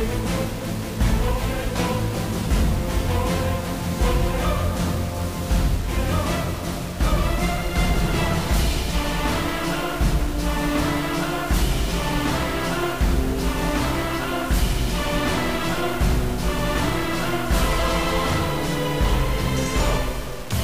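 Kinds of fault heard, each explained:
Low bit depth without dither: Grainy, rough distortion runs through the whole clip and follows the sound, thickening as levels change. Quiet passages turn gritty, and the softest moments either drop to silence or sputter between two levels. The error sits only about 20 dB below the signal, which fits around 5 bits. The likely cause is coarse rounding with no dither, so the error stays tied to the signal rather than spreading into steady hiss.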